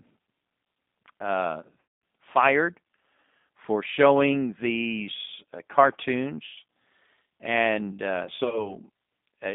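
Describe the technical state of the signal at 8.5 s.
At 8.5 s you're right in the middle of VoIP packet loss concealed by the speech codec, running from about 8.36 to 8.77 s. Around 60 ms went missing, scattered across roughly 160 ms in gaps of no more than 20 ms each, which points to three lost packets. The decoder fills each hole by stretching its last pitch and filter, so you get short buzzy, fading patches. Because each frame leans on the one before, the sound stays thin and a bit distorted for a while after real packets resume.

Underneath all that sits the G.729 codec, here G.729A at 8 kbit/s. It rebuilds the sound from a vocal tract model plus a few pulses, and the line passes only about 150 Hz to 3.7 kHz. The damage is plainly audible as a rough, slightly synthetic, band-limited quality.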